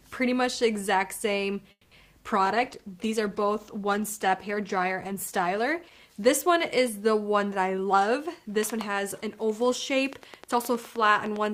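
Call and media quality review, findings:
Call audio freeze, 1.71–1.93 s: a fading buzz fills the gap, with about 70 ms of silence. This is likely a jitter buffer run dry by held-up packets. Playback resumes where it stopped and adds about 200 ms of delay.

Call bitrate drop, 2.46–6.07 s: the sound turns rough and muffled. The bandwidth estimate fell and the encoder dropped from 64 to 15 kbps, shedding high frequencies, with about 3.5 s at the floor.

Jitter buffer speed-up, 7.67–10.01 s: the sound is hurried at 108% speed with unchanged pitch. The receiver trimmed pitch-period slices, roughly a fifth of a second in total, to shrink excess buffered delay.

Train of clicks, 10.13 s to the end: regular ticking at about 9.7 per second, peaking about 5 dB above the sound. Likely interference or a faulty connection injecting pulses of much the same shape.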